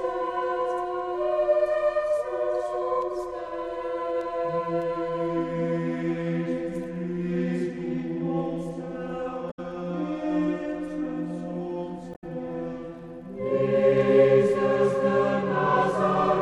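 At 9.50 to 9.59 s and 12.11 to 12.24 s, damaged data in the compressed stream makes the decoder lose frame sync, producing brief glitches.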